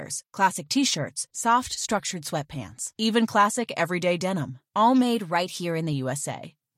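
A drift correction step affects this speech clip from 5.03 to 5.93 s, right after "classic everyday denim all". Playback runs 5.5% fast and pitch rises 92.5 cents, nearly a semitone, before snapping back. Clock-matching software likely jumped its rate to rebalance a buffer.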